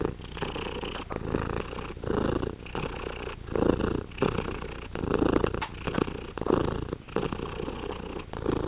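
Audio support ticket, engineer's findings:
Sound dropped by the voice detector, 7.02–7.08 s and 8.3–8.32 s: sound cut out for 60 ms and 20 ms, replaced by steady comfort noise, then resumed. Likely cause: sender's detector misreading quiet sound as background. Band stops at 4 kHz, consistent with a narrowband call codec.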